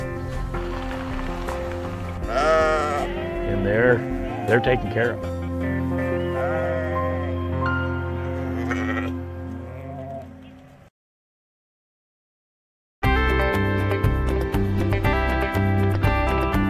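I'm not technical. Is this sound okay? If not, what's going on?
Yes, nothing stood out as a problem when listening to this sound.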